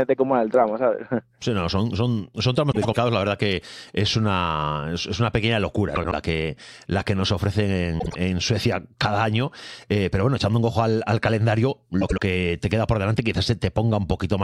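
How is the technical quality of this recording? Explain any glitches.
The recording has four short garbled spots, all from frames out of order. They occur at 2.71–2.97 s after "son son son tramos", 5.95–6.13 s between "es una pequeña locura" and "que la que nos", 7.99–8.15 s, and 12.01–12.20 s between "un ojo al calendario" and "que te queda por". In each, two adjacent blocks of decoded audio play swapped. The blocks are about 104, 78, 52 and 78 ms long, which fits runs of two to four codec frames. The result is a brief stuttering flutter, and no time is lost.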